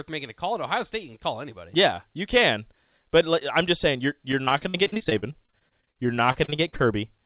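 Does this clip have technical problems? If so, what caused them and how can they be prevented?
Yes. From 4.32 to 6.81 s, right after "I'm just saying you're", there is repeated packet loss (robotic sound). About 31 gaps, none longer than 49 ms, are each filled by extending the previous sound, so over a quarter of that stretch is synthetic and choppy. A more stable network, a deeper jitter buffer or forward error correction would prevent it.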